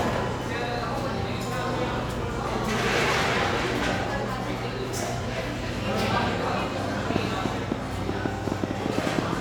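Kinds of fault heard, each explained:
Train of clicks, 7.10 to 9.34 s: a burst of short, similar pulses rides on top of the sound at about 7.2 per second, spaced unevenly rather than on a steady beat. Around fifteen clicks occur, the strongest peaking roughly 15 dB above the surrounding audio, so they stand out as sharp ticking through to nearly the end. The likely cause is interference from nearby equipment or a faulty connection or power supply injecting pulses.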